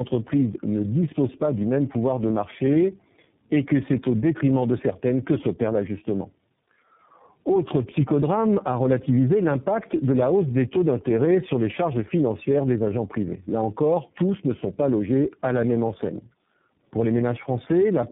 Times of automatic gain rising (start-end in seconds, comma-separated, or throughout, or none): none